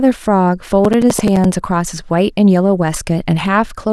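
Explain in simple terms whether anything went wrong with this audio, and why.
From 0.77 to 1.62 s the speech takes on a robotic rattle at about 11.7 times per second. This is buffer tearing, which fits a 2048-sample buffer. Playback and writing fell out of step, so about a tenth of each buffer replays audio from roughly a third of a second earlier.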